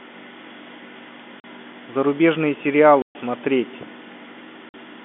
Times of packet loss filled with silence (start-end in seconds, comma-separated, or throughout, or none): 1.40-1.44, 3.02-3.15, 4.69-4.74